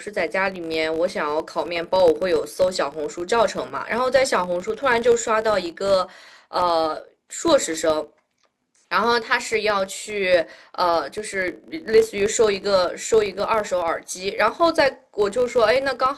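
From start to finish the speech carries a filter restarted on every block. The filter loses its memory at each block boundary and starts again from silence, so each block opens with a small transient. These repeat at 50 Hz, which points to blocks of about 20 ms, and they merge into a buzzy roughness. Mains hum would stay constant, but this buzz rises and falls with the speech level and fades almost completely in the pauses.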